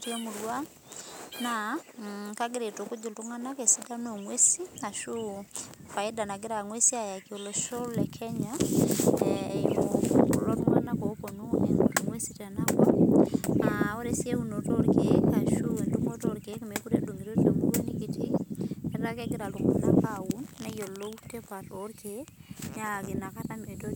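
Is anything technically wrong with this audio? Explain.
No, nothing in this speech recording stands out as a technical problem; it all sounds just as it should.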